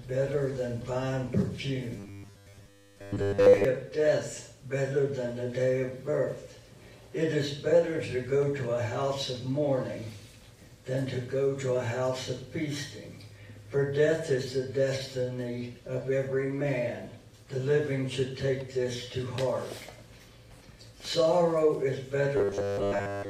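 The audio turns into a rigid, metallic buzz from 1.97 to 3.65 s and again from 22.37 s to the end, the robotic sound of repeated short buffers. Both passages carry a fixed 100 Hz tone, which fits a 10 ms slice being looped. This is likely from audio arriving too seldom, so most of each passage is repeated material while the real audio is skipped. Unlike codec warble or flanging, the buzz stays at a fixed 100 Hz rate.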